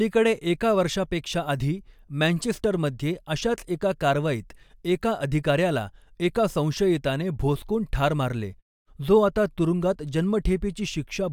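It's a speech clip, and there's nothing technically wrong to point to anywhere in it.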